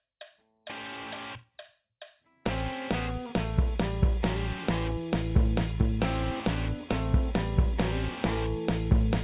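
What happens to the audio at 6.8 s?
Nothing goes wrong at 6.8 s; the music carries on intact through that moment.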